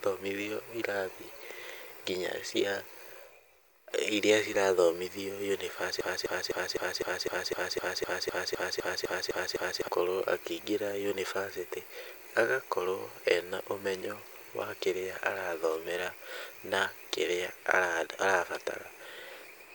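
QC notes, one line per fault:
6.01–9.88 s broken-record loop: a 0.25 s speech fragment repeats exactly 15 times, likely from a stalled stream resending its last fragment. Unlike stutter, every repeat is identical.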